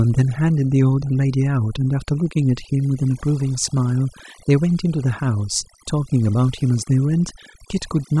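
Overdone noise removal runs throughout the speech. A noise reducer set too strong pulls individual frequency bands down or out whenever they sit close to its noise estimate, taking quiet parts of the voice too, so the background drops and breaks up into twinkling specks.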